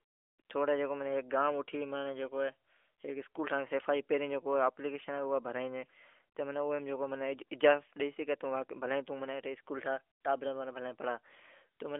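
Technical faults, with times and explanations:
Nothing stood out on listening to this speech clip.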